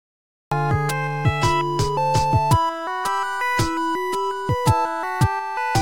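From 0 to 0.52 s there is only digital silence, then the audio bursts in mid-sound: a cut-off start, where capture began late. The waveform steps from a flat line straight into signal with no attack or fade, and the spectrogram shows a sharp vertical edge.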